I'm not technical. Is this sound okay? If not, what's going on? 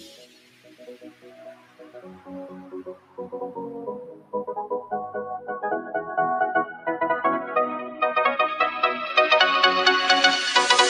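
No. A noise suppressor applied to music or sounds, built for speech, stays on throughout, treating steady parts as noise and making the level pump rather than simply fade.

The sound cut by the noise suppressor is clearest from 0.0 to 2.31 s, 2.48 to 3.19 s, 4.07 to 4.34 s, and briefly 6.72 to 6.87 s. Held or fading parts sink while sudden hits survive.

From 9.10 s to the end, the tone abruptly turns duller, with a faint new hiss. There is no gap or jump in loudness. The likely cause is the input switched to a poorer device, not the suppressor.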